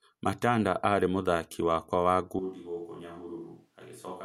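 At 2.39 s there is a switch to a distant microphone, likely because the close microphone's feed dropped out, and it holds to the end. The speech abruptly turns roomy and hollow, loses bass, falls roughly 10 dB, and room noise rises to about 35 dB below it.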